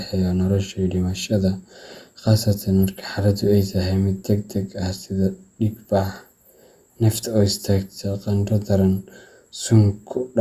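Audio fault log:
Nothing stood out on listening to this speech recording.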